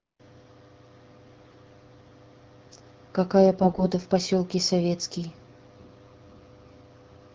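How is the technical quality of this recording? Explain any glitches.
The recording has two brief bursts of corruption over light AMR wideband (HD Voice) coding, whose clarity fits a 12.65 kbit/s mode.

AMR bit errors occur at 1.43 to 1.56 s and 3.61 to 3.86 s. A few percent of the weakly protected frame bits arrive flipped, misplacing excitation pulses and skewing fine pitch, gain and spectral values. The speech turns hoarse, scratchy and gargly while keeping its pitch and level.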